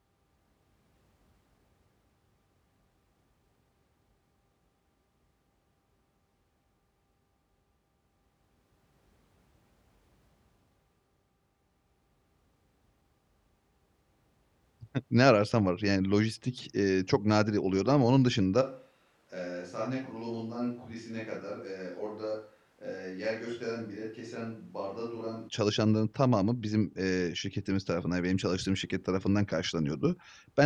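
A switch to a distant microphone runs from 18.63 to 25.47 s, starting right after "nadiren oluyordu ama onun" and ending just before "çalışanların tamamı bizim eee". The speech abruptly turns roomy and hollow, loses its low end, and drops by around 10 dB, while room noise rises to roughly 30 dB below the speech. The likely cause is that the close microphone's feed dropped out, leaving only a more distant pickup, before the close sound snaps back.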